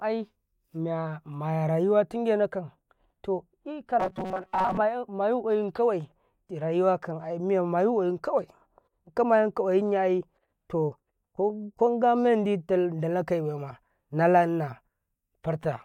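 From 4.00 to 4.78 s, new audio likely arrived too seldom, so a buffer of about 5.3 ms was replayed repeatedly through most of it. This robotic sound from repeated short buffers forces a rigid 188 Hz buzz onto the speech, which turns metallic.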